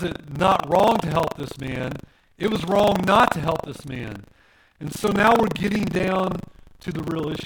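Buffer tearing runs right through: writer and reader have slipped, so roughly 15% of each period replays audio from about 70 ms earlier, giving a robotic 25 Hz rattle.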